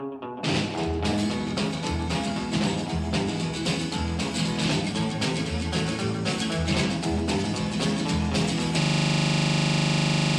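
From 8.82 s to the end, the audio abruptly locks into a rapid, rattling stutter: a single 40 ms fragment repeats exactly, about 39 times, giving a harsh buzz at 25 Hz that never resolves. This is a system hang loop. The computer or its audio driver stopped supplying new samples, while the sound hardware kept replaying the same short section of its ring buffer over and over until the recording ended.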